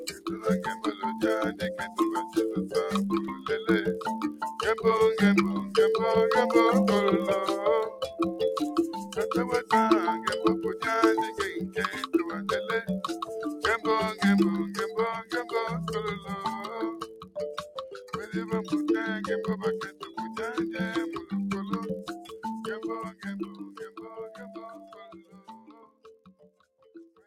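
A block size mismatch (padded) runs through the whole clip. A constant 43.1 Hz buzz fits zero-padded gaps in 1024-sample read blocks, and the audio plays only 0.999 times as fast, so it is barely slowed. The pitch stays about normal, unlike a resampling error.

A speech noise suppressor was also applied to the non-speech sound. It swings the level by around 10 dB, so held and decaying parts pump and thin out while attacks get through.

It also cuts sound outright, which is deeper than the general pumping. The cuts fall at 0.0–4.42 s (about 13 dB), 9.02–9.7 s (about 12 dB), 15.22–18.13 s (about 13 dB), 19.91–20.1 s (about 11 dB) and 22.33 s to the end (about 13 dB). Steady tones and tails sink there rather than dropping to silence.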